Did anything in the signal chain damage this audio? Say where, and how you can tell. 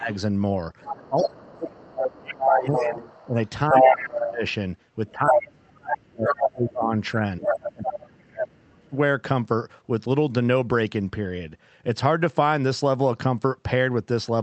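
Yes, at the call-processing stage. Speech suppressed in double talk: the echo canceller likely mistook the talker for loudspeaker echo and pulled the level down at 0.00 to 0.11 s (about 15 dB), 1.08 to 4.44 s (about 25 dB) and 5.12 to 8.96 s (about 35 dB), so the speech dips and drops out in pieces.

The other side's voice is leaking through, likely because the same echo canceller left residual loudspeaker pickup in the microphone signal. It is audible at 0.82 to 4.53 s and 5.07 to 5.63 s, about 5 dB above the talker, level with the talker at 6.28 to 6.48 s and 7.41 to 7.95 s, and as a faint trace at 8.57 to 8.63 s.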